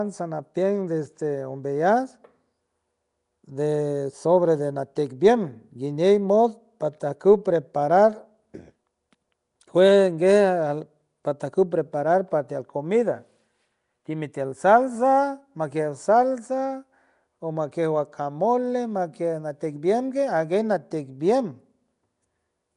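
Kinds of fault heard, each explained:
Nellymoser compression: The speech carries a rough, hissy haze and a smeared, underwater character. The damage is plainly audible throughout. This points to a low-rate block codec, likely Nellymoser Asao, the old Flash microphone codec. It spends very few bits on each sample in short blocks. Weak bands get none and are filled in with noise, which causes the hiss. Nothing is heard above 10.6 kHz. The sound fits a rate near 44 kbps.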